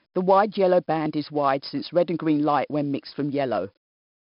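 Throughout the speech, 4-bit ADPCM compression stores each sample as a coarse predicted step, adding heavy gritty hiss that rises with loud syllables. Nothing sits above 5.3 kHz, suggesting an 11 kHz rate. A spectrogram shows a hard ceiling and a level-tracking noise haze.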